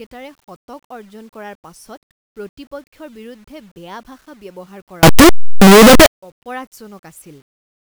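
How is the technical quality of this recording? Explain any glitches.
There is one serious glitch. From 5.03 to 6.06 s, just after "ভাষা ব্যৱহাৰ", the speech becomes very loud, harsh distortion. Quiet moments blast as hard as the rest. The likely cause is signed and unsigned mixed up in the 8-bit samples. The flipped top bit turns each zero crossing into a full-range jump.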